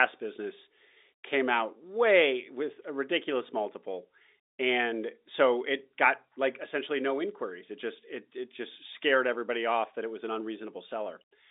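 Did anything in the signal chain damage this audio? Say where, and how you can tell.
No, no damage heard.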